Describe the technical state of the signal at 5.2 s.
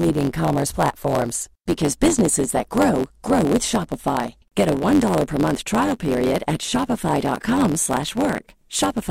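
At 5.2 s the speech is affected by a block size mismatch (truncated), present throughout the clip. One stage writes blocks longer than the next reads, and each block's tail is discarded, which fits 512-sample writes. The result is a buzz at about 92 Hz and speech running 1.07 times fast at roughly normal pitch. A spectrogram shows a comb of harmonics spaced about 92 Hz apart, and the waveform shows small regular discontinuities at each block join.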